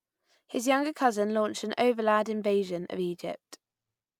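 No technical faults can be heard at any point in the speech.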